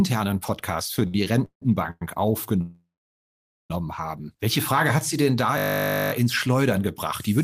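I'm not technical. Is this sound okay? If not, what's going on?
No. Three separate problems can be heard.

From 1.0 to 2.02 s there are repeated stalls (stutter). Network packets kept arriving late, so the receiving side ran out of audio five times and stretched the last sound to fill each wait, the longest about 165 ms. About 0.36 s of filler goes into the speech, so it drags and stutters, though nothing is actually lost.

From 2.61 to 3.71 s the speech stops for about 1.1 s, most of it (about 0.86 s) silent, then carries on exactly where it left off. This is likely a call audio freeze: packets held up in transit until the receiver ran dry. Nothing is missing, but the pause is added into the conversation.

From 5.58 to 6.12 s, right after "denn da", there is a system hang loop. The computer briefly froze while the sound hardware kept replaying the same tiny 20 ms piece of audio, 27 times in a row. 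It comes out as a steady 50 Hz buzz instead of speech.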